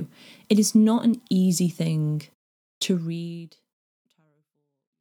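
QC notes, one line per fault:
No faults are heard in this speech. The smooth fade out begins around 3 s and brings the level down gradually to the end, with no click or hard edge.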